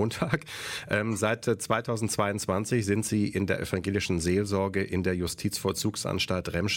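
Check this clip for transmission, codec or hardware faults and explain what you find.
Nothing stood out on listening to the clip.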